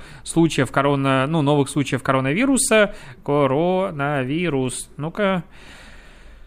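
No technical fault is audible anywhere in the recording.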